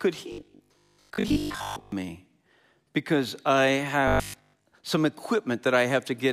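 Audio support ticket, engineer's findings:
Likely audio starvation in playback buffer, last ~20 ms looped, most real audio skipped. Robotic sound from repeated short buffers, rigid 50 Hz metallic buzz, 0.32–1.92 s and 4.08–4.68 s.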